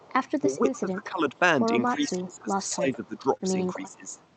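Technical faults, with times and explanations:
0.0–0.3 s, 0.66–0.79 s, 2.04–2.1 s and 4.09–4.24 s, echo leak: the far end's echo canceller likely let part of its loudspeaker pickup through, so a faint copy of the sound returns about 0.29 s late. It sits roughly 20 to 40 dB below the main sound and is heard as brief scraps.
0.41–1.34 s, 1.93–2.57 s, 2.75–3.27 s and 3.74–4.14 s, speech suppressed in double talk: with both sides active, the echo canceller likely could not separate the talker from the returning echo and turned the talker down too. The voice dips by up to about 10 to 15 dB and loses its edges in patches.
3.37–3.41 s, short concealed packet loss: about 20 ms of audio arrived too late to decode, and the receiver filled 16 ms of it by extending the preceding sound before blending back into the real signal. This leaves a brief smear in the speech.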